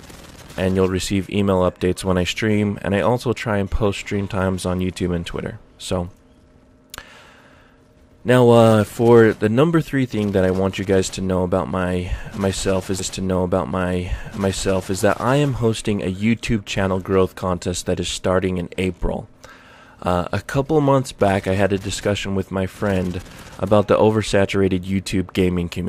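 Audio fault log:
12.98 to 14.98 s: stream segment repeated. The player delivered the same 2 s chunk twice, so the preceding 2 s of audio plays again and the timeline runs 2 s longer. A brief discontinuity is audible at the jump back, where the waveform splices abruptly.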